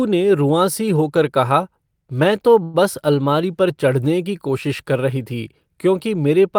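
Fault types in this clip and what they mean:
Call audio freeze: after "होकर कहा मैं तो" at 2.63 s, the last sound is stretched for 104 ms, likely from a jitter-buffer underrun, then speech resumes intact.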